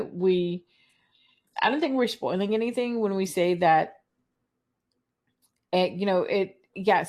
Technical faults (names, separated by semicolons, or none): adaptive stream starting at a low bitrate